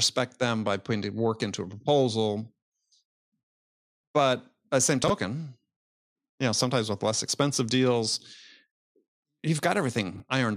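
At 5.04 to 5.10 s and again at 10.16 to 10.20 s the speech briefly jumbles, a sign of chunks out of order. Short 20 ms pieces play late, displaced by two chunks the first time and one the second, leaving three hard joins. Unlike a dropout, no silence or missing sound is heard. Unlike a repeat, nothing plays twice. The same audio is simply shuffled.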